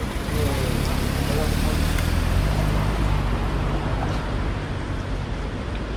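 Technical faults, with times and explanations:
Throughout: transcoding between lossy codecs. Two layers of coding damage sit on top of each other. There is the smeared, swirly high-frequency texture of an MP3-style encode, and over it the grainier, slightly hollow artefacts typical of Opus, which fits a chain likely running from MP3 at around 65 kbit/s into Opus at around 48 kbit/s. The second encoder spends bits on the first one's flaws. Nothing sounds above about 20.1 kHz. A single lossy pass would show only one artefact signature.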